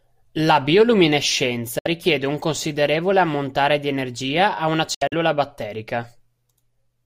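At 1.79 s the speech drops to silence for about 64 ms before "un considerevole ammontare di". At 4.94 to 5.14 s, after "di energia a una", gaps totalling about 107 ms chop it. A Bluetooth dropout likely discarded late packets; speech resumes as if it had played on, unlike a stall-and-resume glitch.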